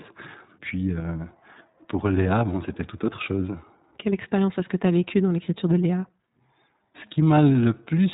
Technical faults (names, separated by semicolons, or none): iLBC codec